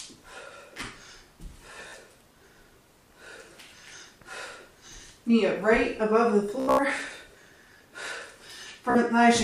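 Bluetooth stutter appears three times. From 1.88 to 1.94 s, late or lost packets leave the receiver replaying its last buffer, so a short slice repeats as a brief machine-gun buzz, and about 46 ms of sound is skipped when playback resumes. From 6.60 to 6.83 s, about 168 ms goes missing in bursts across 183 ms, the longest run near 91 ms. At 8.90 to 8.98 s, about 46 ms is lost again. On a waveform, each shows an identical cycle repeated; on a spectrogram, a comb of matching vertical stripes, then a jump.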